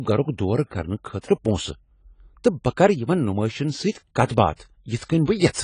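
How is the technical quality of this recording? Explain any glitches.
The speech is clearly degraded by lossy coding across its whole length. AAC compression, throughout: the audio is dull and smeared, with nothing above 10 kHz and a warbling, fizzy texture on sibilants, likely from AAC-LC at a low bitrate around 24 kbps, discarding high bands and quantising what remains too coarsely.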